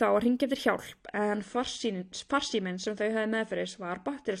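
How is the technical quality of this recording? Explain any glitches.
The speech has one fault. From 0.99 s to the end, the adaptive stream switches to a lower bitrate, likely because the connection slowed. Treble above 9.8 kHz vanishes suddenly, with no gap, and codec artefacts rise, which points to a drop from around 96 to 32 kbit/s. A spectrogram shows the high band ending sharply at 0.99 s, while the waveform stays continuous.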